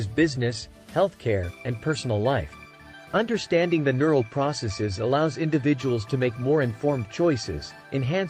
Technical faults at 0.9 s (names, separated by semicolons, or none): none